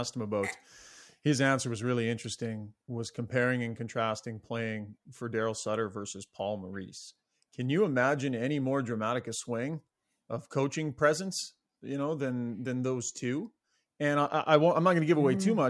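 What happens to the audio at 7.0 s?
Nothing goes wrong at 7.0 s; the speech runs through that moment intact, with no dropout, click, distortion or other fault.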